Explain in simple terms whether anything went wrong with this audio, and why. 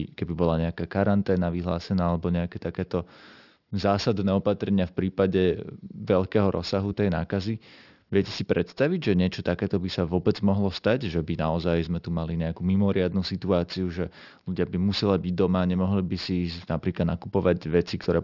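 Aliasing, throughout the clip: sounds above 6 kHz weren't removed before the sample rate was lowered, so they fold back as gritty, wrong pitches in the speech.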